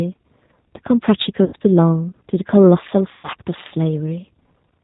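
Speech clip carrying G.729 codec coloring throughout: band-limited below 4 kHz, slightly rough and synthetic, consistent with an 8 kbit/s G.729A stream. VoIP packet loss concealed by the speech codec occurs at 1.44–1.56 s and 3.12–3.28 s, where roughly 90 ms and 120 ms of audio were rebuilt from the last pitch and filter. Each gap is stretched into a fading buzzy tone or coloured noise, and the voice stays weak briefly afterwards, fitting three and four lost packets.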